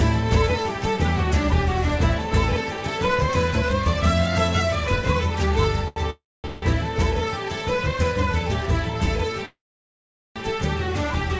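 At 5.88 s there is a short stall from a late packet. One packet came in late and the jitter buffer ran dry. The last sound is held for about 83 ms with a slight buzz or dip. Then the audio carries on with nothing lost.

Call audio freezes follow, likely from packets delayed in transit. From 6.10 to 6.46 s the held sound fades to silence for about 230 ms. A second hold runs to 6.64 s without going silent. At 9.45 s a longer freeze lasts until 10.38 s, with about 800 ms of silence. Each time, the audio resumes where it stopped.

Throughout, the call path cuts everything above 8 kHz, which fits a wideband call codec such as G.722.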